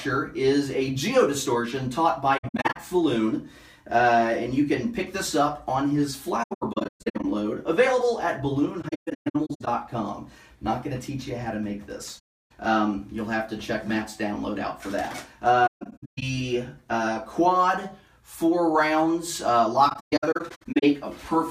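AAC frame loss with muting occurs six times: 2.37–2.77 s, 6.42–7.25 s, 8.82–9.68 s, 12.18–12.52 s (one solid 320 ms hole), 15.66–16.23 s and 19.89–20.84 s. Lost frames are decoded as silence, and overlapping windows fade each gap in and out, so the holes, up to around 150 ms in the scattered stretches, sound soft-edged, unlike hard dropouts.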